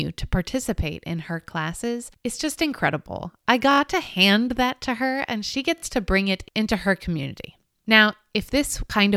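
Speech with four brief, hard-edged stutters, at 1.43–1.45 s after "to participate in her", 3.71–3.80 s, 5.78–5.82 s and 7.23–7.25 s, each replaying a 21 ms slice. This is a repeated buffer: new audio arrived late, so the previous block played again, which fits a 1024-sample buffer.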